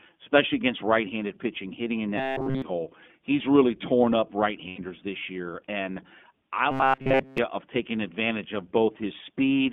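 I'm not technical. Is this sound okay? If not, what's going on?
No, there are problems.

Throughout, the speech has passed through the iLBC codec, a phone-quality voice compressor used for internet calls. It keeps only roughly 200 Hz to 3.5 kHz, so the sound is muffled and thin, like an old telephone. It also rebuilds the voice from a simplified model in 20 ms slices, which leaves a plainly audible rough, slightly synthetic edge on every word.

From 2.18 to 2.62 s and again from 6.71 to 7.38 s, the voice turns into a hard metallic buzz at about 133 Hz. It roughly follows the speech, but most of the real sound is missing. This is robotic sound from repeated short buffers. The likely cause is new audio arriving too late, so the software kept replaying a tiny slice of about 7.5 ms. That repetition rate fixes the buzz pitch.

At 4.68 to 4.80 s there are lost iLBC frames. About 100 ms of audio never arrived, which fits five 20 ms frames. 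The decoder covered the gap by repeating the last bit of voice with some added noise. For that moment you hear a brief held, buzzy vowel sound. Normal speech returns right after it.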